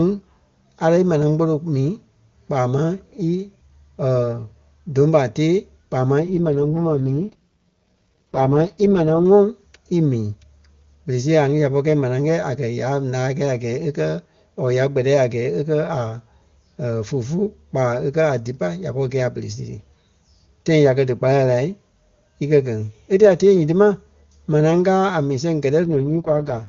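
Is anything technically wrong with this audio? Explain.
Yes, there are two AMR rate drops, from 6.20 to 9.25 s after "ɓa tée kpaa máŋ" and from 25.84 to 26.68 s after "a mii sɛŋ". The HD Voice codec, clean elsewhere, gets pushed down to its lowest mode, roughly 6.6 kbit/s, to shield a weak link, so the speech turns raspy and synthetic without losing bandwidth or dropping out.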